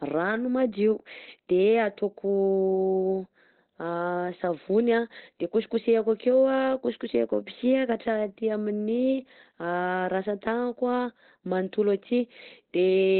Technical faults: Opus compression

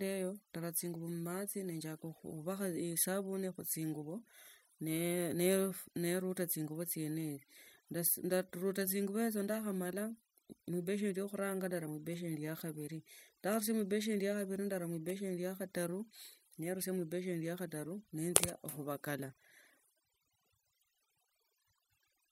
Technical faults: overdone noise removal

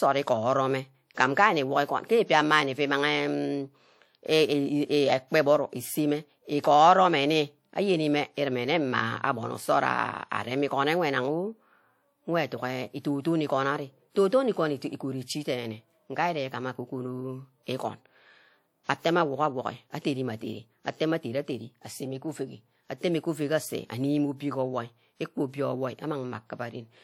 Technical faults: pre-echo

